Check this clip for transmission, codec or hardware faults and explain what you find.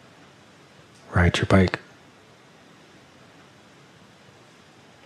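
No transmission, codec or hardware faults can be heard in this clip. Nothing in the audio points to a problem anywhere along its path from capture to playback.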